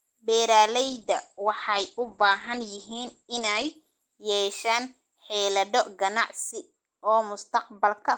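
From 0.89 s to 3.81 s there is a call bitrate drop. The encoder was starved of bits, which fits a fall from around 32 kbps to about 10 kbps. The speech turns rough and watery, and on a spectrogram the energy above 8 kHz vanishes, where before it reached 20 kHz.

From 6.51 s to the end, de-emphasis was applied wrongly: a treble cut went onto audio that never had the matching boost. The speech sounds dull and muffled. A spectrogram shows a smooth downward slope, about 14 dB lower at 10 kHz than at 1 kHz.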